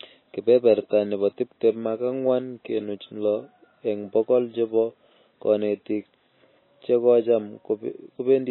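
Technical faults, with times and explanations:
Throughout, MP3 compression: the speech sounds watery and swirling, with a metallic chirp on s sounds, smeared attacks, and a dull, muffled top because nothing survives above 4 kHz. The likely cause is an MP3 encoder starved of bits, with damage this heavy fitting a bitrate around 20 kbps. It has cut off the treble at a fixed frequency and dropped weak frequency lines, which flicker on and off from frame to frame.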